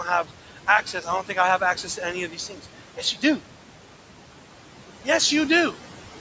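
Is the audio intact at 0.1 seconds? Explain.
No. Noise suppressor artifacts run through the whole clip, including 0.1 s. Bands judged to be steady room noise are pulled down by about 12 dB frame by frame, so the noise sinks between the words and rises under them. Unlike a noise gate, which cuts everything at once, the suppressor works band by band.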